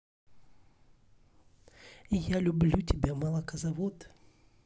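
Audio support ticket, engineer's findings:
No audible faults found in the speech recording. Nothing to escalate from this listening check.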